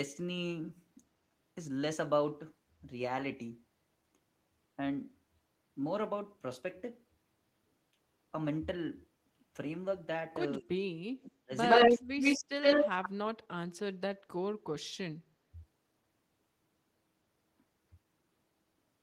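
From 10.59 to 11.51 s, the echo canceller likely could not tell the near talker from the loudspeaker echo while both sides spoke at once, so it turned both down. This is speech suppressed in double talk. The speech dips by as much as about 40 dB, and roughly 0.7 s of it in that span thins or drops away in pieces.

At 11.25 to 11.31 s there is a brief echo leak, likely residue the far end's canceller failed to remove from its loudspeaker pickup. A faint copy of the speech, about 15 dB below it, returns 116 ms late.

A much stronger echo leak runs from 11.69 to 13.09 s, again likely from the same incomplete cancellation. The delayed copy arrives 116 ms behind the speech and sits about 10 dB above it, giving a loud doubled sound.

Inside that stretch, from 11.87 to 12.05 s, the speech is again suppressed in double talk, likely because the canceller damped both sides. It drops by about 25 dB for around 0.2 s.

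From 14.77 to 15.28 s, the same double-talk suppression likely recurs, pulling the speech down by about 30 dB for roughly 0.2 s.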